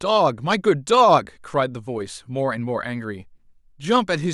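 Nothing in this recording trips up the ear, with no faults turning up anywhere along the way.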